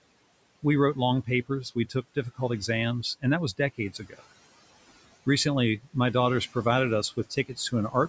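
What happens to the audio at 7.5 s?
Between 7.11 and 7.73 s, the noise suppressor mistakes part of the speech for background noise and turns it down along with the room noise, cutting it by up to about 13 dB. Around 150 ms of sound in total is affected, so the affected speech comes out swallowed and faint. Noise suppressor artifacts are also present here, as throughout the clip. Band-by-band gain cuts the noise by about 19 dB between sounds and lets it rise underneath them.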